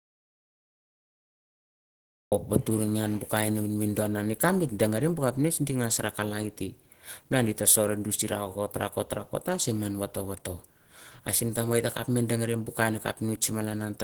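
From the very first instant until 2.32 s the recording is an audio dropout to silence: the gap is already under way when the clip begins and ends abruptly as speech cuts in. The waveform is a flat line and the spectrogram is solid black, with no room tone or noise floor at all. That silence points to an input that was likely lost, through a disconnection or a mute, while the recorder kept writing silence.

Across the whole clip the speech carries plainly audible damage consistent with Opus compression. The speech sounds rough and grainy, and takes on a hoarse, muffled quality. This fits a low bitrate around 16 kbps and the encoder's hybrid mode, which likely splits the signal between a speech coder for the lower band and noise-like band filling above it. On a spectrogram the upper bands look smeared and speckled rather than finely detailed.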